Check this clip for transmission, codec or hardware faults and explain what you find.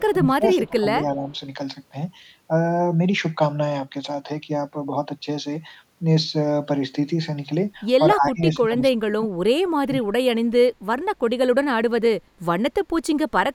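There is one recurring fault, speech suppressed in double talk, heard three times in this speech clip. From 0.0 to 1.28 s the voice sinks by around 20 dB for roughly a second. From 8.15 to 9.29 s and again from 9.62 to 10.26 s it drops deeper, around 30 dB. The likely cause is an echo canceller that could not tell the near talker from loudspeaker echo while both sides spoke, so it attenuated everything.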